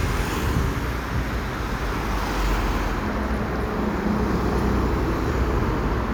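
No technical faults can be heard anywhere in the audio; the signal holds steady and intact throughout.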